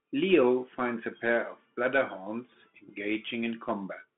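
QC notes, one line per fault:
Throughout, Bluetooth CVSD headset codec: band-limited to about 150 Hz to 3.4 kHz, nothing above 3.7 kHz, with plainly audible slope-overload grit and granular hiss from one-bit delta coding.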